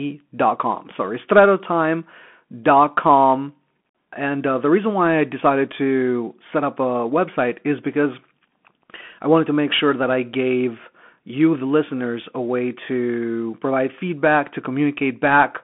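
Right through the speech you get the Bluetooth CVSD headset codec: the one-bit delta coder can't keep up with fast swings, so there's plainly audible grainy damage, and the band sits at roughly 200 Hz to 3.4 kHz, with nothing past 3.8 kHz, which fits a 64 kbps headset link.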